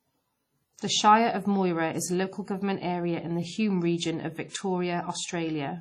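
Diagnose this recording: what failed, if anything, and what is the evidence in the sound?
Throughout the speech there is a washy, ringing quality, with hiss that swells and fades along with the signal and nothing above 16 kHz. The codec stage is the likely cause: heavy WMA compression, where long transform blocks smear quantisation noise and a bitrate around 32 kbps zeroes weak components.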